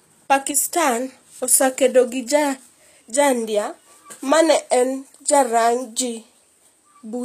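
Likely HE-AAC compression at a low bitrate, around 24 kbps, rebuilding the treble by copying lower bands upward, so sibilants sound gritty and metallic, with nothing above 14.9 kHz throughout.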